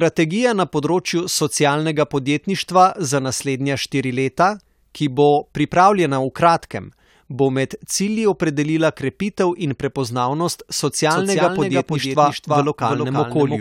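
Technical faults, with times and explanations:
11.11 s to the end: doubled audio track. From 11.11 s a second, full-band copy of the speech runs under the original, trailing it by roughly 300 ms and sitting about 5 dB lower. It cuts in abruptly rather than fading up, and carries no decay or room colour. The likely cause is the same signal captured again through a slower path and mixed back in.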